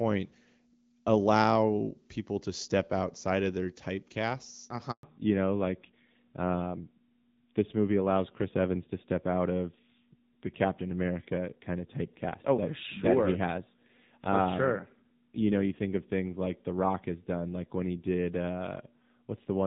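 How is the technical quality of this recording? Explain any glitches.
The recording has two linked faults: a brief dropout partway through the call, then a lasting loss of bandwidth.

At 4.91 s a handover gap of 120 ms leaves the waveform flat, as the call switches networks and no frames arrive; the sound simply cuts out.

From 5.03 s to the end, a fallback to narrowband erases everything above 4 kHz. On a spectrogram this looks like a hard ceiling, replacing the earlier HD Voice band. The audio turns duller and rougher, which fits AMR-NB at about 7.4 kbit/s.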